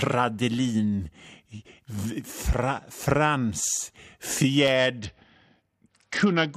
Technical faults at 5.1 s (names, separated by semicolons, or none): Bluetooth SBC bit pool drop